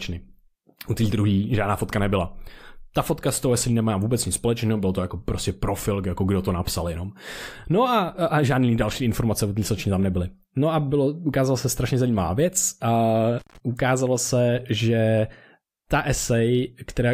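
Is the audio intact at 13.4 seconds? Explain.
No. From 13.39 to 13.58 s there is an intermittent contact fault: a loose cable or plug briefly loses its connection, breaking the signal path for roughly 138 ms. The speech cuts out abruptly, with crackle as the contact breaks and again as it remakes, and faint hiss remains while the line is open. The signal returns just before "ukázalo se že", so that phrase marks the end of the dropout.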